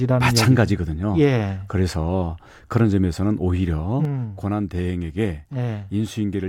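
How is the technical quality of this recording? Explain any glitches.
The recording has one clear glitch. From 4.05 s to the end, the speech drops abruptly by about 6 dB, which points to one channel dropping out; the likely cause is a stereo channel going silent while the two are summed to mono. Content common to both channels halves in level, and anything present only in the lost side vanishes. Unlike a fade or gain ride, the drop is instantaneous and holds at a fixed lower level.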